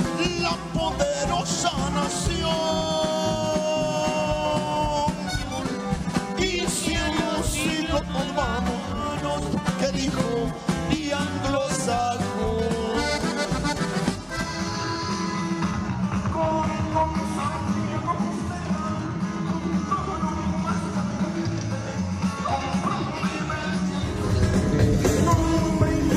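From about 0.17 s right through to 26.16 s there's a steady rattle of faint ticks, roughly ten a second: clock slip clicks, likely from two unsynced clocks drifting by a couple of hundred ppm, each tick sounding like a single sample being dropped or repeated.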